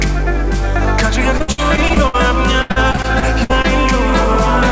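From 1.38 to 2.16 s, and again from 2.62 to 3.66 s, the sound turns choppy, with bits missing. The gaps are short, the longest about 60 ms in the first stretch and 80 ms in the second. This is repeated packet loss (robotic sound): each lost piece is covered by stretching the previous sound, which fills roughly a third, then a quarter, of those stretches. The band stops at 8 kHz, which fits a wideband call codec.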